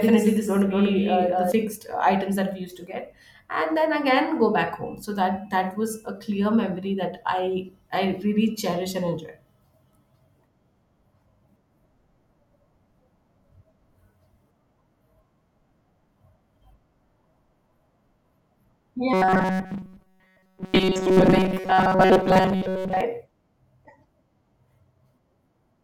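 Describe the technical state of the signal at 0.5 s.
At 0.5 s the speech carries a doubled audio track, running from the start of the clip until 1.52 s, just before "fixed uh items that". A second copy at about the same level trails by roughly a fifth of a second, likely from a slower second capture path. It sounds like a dry, stuttering echo. On a spectrogram each syllable appears twice, offset in time, and the doubling stops abruptly.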